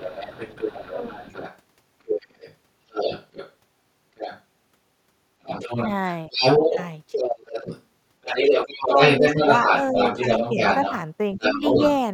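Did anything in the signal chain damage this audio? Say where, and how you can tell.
Yes. The other side's voice leaking through is audible from 0 to 4.43 s, about 10 dB below the talker, and again from 5.42 to 11.93 s, where it is somewhat louder than the talker. It is a distinct second voice, not room reverberation, which places the damage in call processing: the echo canceller likely left loudspeaker sound in the microphone signal.

Speech suppressed in double talk occurs at 0.91–1.23 s, 6.28–7.68 s and 8.85–11.63 s, each time while the leaked voice is present. The dip is deepest, about 20 dB, at 6.28–7.68 s and shallower elsewhere. Unlike network dropouts, these dips follow the overlap, likely because the canceller turned down both voices.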